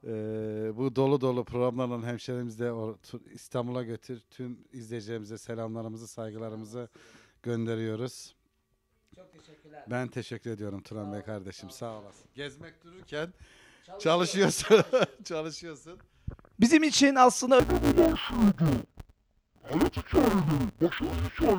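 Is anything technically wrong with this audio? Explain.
Yes. From 17.60 s to the end at 21.59 s, the audio shows interleaved audio read as planar. Within each 5.8 ms block, alternating left and right samples are split so the first half feeds one channel and the second half the other, each at half speed, which fits a 256-sample block. The sound turns dull and robotic, with a buzz at about 172 Hz and no clear octave drop. A waveform shows a jagged seam every 5.8 ms. A spectrogram shows smeared high frequencies and evenly spaced bands at multiples of 172 Hz.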